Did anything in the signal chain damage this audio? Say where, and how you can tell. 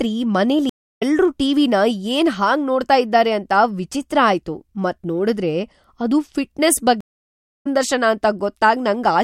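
Yes. A stream reconnect hits this speech twice, at the network stage: at 0.69 s a silence of 303 ms runs to 1.03 s, and at 7.01 s, just after "ಮತ್ ನೋಡುದ್ರೆ ಅದು ಫಿಟ್ನೆಸ್", a 633 ms gap runs to 7.67 s. Each time the speech resumes further along rather than where it stopped, about 0.3 s later before "ಎಲ್ರೂ ಟಿವಿನ ಏನ್ ಹಾಗ್" and roughly 0.7 s later in the second case. That skip is the sign of a live connection dropping and the player restarting its decoder mid-stream.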